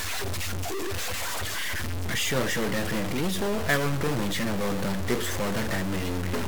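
Throughout the speech, a harsh, buzzy distortion rides on every sound and pauses fill with noise at about -25 dBFS, likely from a stuck bit.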